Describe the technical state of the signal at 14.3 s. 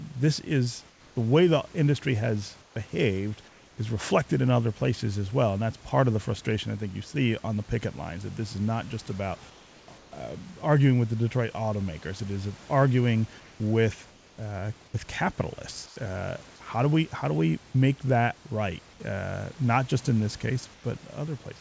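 At 14.3 s the background falls within a 0.28 s stretch, 14.10 to 14.38 s, of comfort noise in place of the background: room detail turns steady and featureless, about 2 dB quieter. The likely cause is discontinuous transmission, with the receiver synthesising shaped noise while speech was absent.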